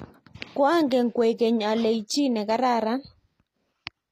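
Throughout the speech, the treble sounds bright yet synthetic: sibilants come out gritty and metallic, and nothing rises above 14.8 kHz. A plain low-pass would dull the top instead. This is likely HE-AAC compression near 24 kbps, rebuilding treble from copied lower bands.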